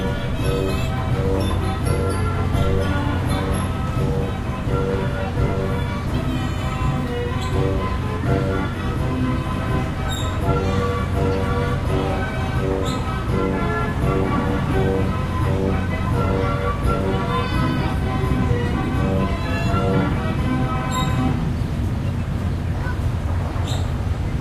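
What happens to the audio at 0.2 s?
Nothing goes wrong at 0.2 s; the sound plays through that moment intact, with no dropout, click or distortion.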